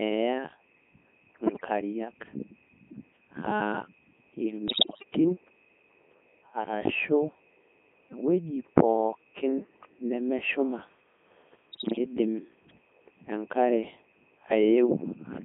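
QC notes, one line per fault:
Throughout: Codec 2 vocoder. The speech is rebuilt from sine waves driven by pitch, voicing, energy and spectral envelope alone, so it sounds robotic and buzzy with heavy damage, confined to about 200 Hz to 3.5 kHz. The detail level fits the 3.2 kbit/s mode. Unlike ordinary low-bitrate smearing, no original waveform survives.
1.46–1.68 s, 4.68–5.04 s, 11.72–11.98 s: bit errors on digital voice radio. A high rate of flipped bits, about 7 percent in the first two bursts and about 10 percent in the last, corrupts whole vocoder frames. The synthetic voice lurches in pitch, level and tone colour, breaking into bleeps and warbling gibberish. These are short bursts, unlike the steady buzz running through the whole clip.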